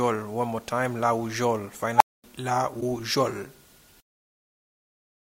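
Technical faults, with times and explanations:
1.96–2.24 s, unstable filter: a tone around 1 kHz swells up in about 41 ms until it clips, then drops to about 235 ms of silence. That's a recursive filter running with bad coefficients, blowing up, overflowing, and cutting out until it resets.
2.77–2.83 s, damaged data in the compressed stream: a short glitch where the decoder hits corrupted frames, loses sync, and hunts for the next valid frame header.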